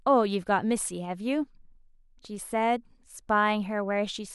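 Speech recording, with no technical faults audible anywhere in it.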